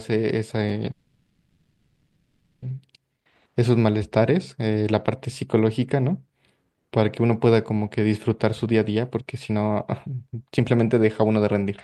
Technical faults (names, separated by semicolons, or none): call audio freeze; chunks out of order; jitter buffer speed-up